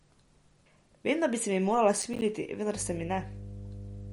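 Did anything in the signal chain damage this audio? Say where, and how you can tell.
Yes. The codec stage shows MP3 compression throughout, likely the cause. Nothing sounds above 11.2 kHz, and the speech is watery, which fits a low bitrate near 48 kbps.

At the driver or buffer stage, processor overload crackle runs from 1.97 to 2.22 s. Short silent gaps, around ten of them, fit missed 5 ms buffers.

In the analogue wiring, mains hum at 50 Hz enters at 2.75 s and lasts to the end. It sits about 10 dB below the speech, pointing to a ground loop.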